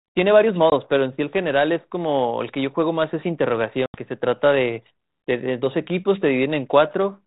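At 0.70 s and again from 3.86 to 3.98 s, this speech on what sounds like a 32 kbit/s G.726 ADPCM line has packet loss holes, one about 20 ms and one about 80 ms, that cut out abruptly. Each time the decoder's predictor has lost track, so the speech comes back slightly distorted before it settles.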